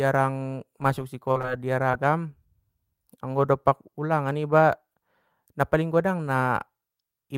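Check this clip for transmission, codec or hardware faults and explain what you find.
The speech shows short concealed packet loss three times: 1.31 to 1.37 s, 1.41 to 1.46 s, and 1.92 to 1.95 s. About 40, 20 and 20 ms never arrived in time. The decoder stretched the preceding sound across each gap. Each leaves a brief smear or wobble.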